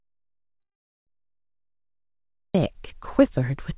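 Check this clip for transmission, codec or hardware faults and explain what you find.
Two faults are audible: a long dropout at the start, and a call audio freeze inside it. The audio stops at 4 kHz, consistent with a narrowband call codec such as G.711 A-law.

Audio dropout to silence runs from the very start to 2.55 s. It is already under way when the clip begins. It is likely caused by the input being lost upstream while the chain kept writing silence. The result is dead silence with no room tone until the sound cuts in abruptly.

A call audio freeze occurs from 0.60 to 1.09 s. It is likely a jitter-buffer underrun, where delayed packets forced the receiver to extend the last audio and insert about 470 ms of delay without losing content. Because it falls within the dropout, the fill is mostly silent.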